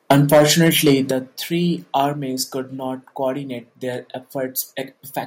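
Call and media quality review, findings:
Harsh, crackling edge on the loudest speech from 0.1 to 0.94 s, peaks flattened and running about 7 dB past the converter's limit, with around one sample in twenty clipped. Microphone overload, likely from input volume set too high, driving the converter into its limit.

Sudden drops in speech and background level at 0.12 s (about 4 dB), 1.11 s (about 7 dB) and 2.13 s (about 3 dB), the last just before "could not coordinate their". Microphone volume stepped down, likely by call software reacting to clipping.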